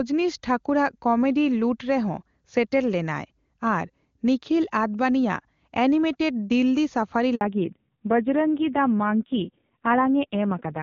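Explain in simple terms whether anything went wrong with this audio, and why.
At 7.35 s the call switched networks, a handover gap: no speech came through for 60 ms, so the speech drops out briefly and anything said then is lost.

Right after, at 7.41 s, came a fallback to narrowband. The call left HD Voice for an older, lower-quality phone codec, so everything above 4 kHz disappears until the end, and the speech sounds duller and rougher.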